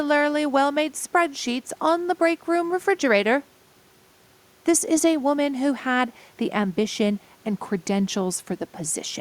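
Nothing is technically wrong with this speech clip; the only thing beneath the talking is the room's own background noise, sitting about 37 dB below the speech.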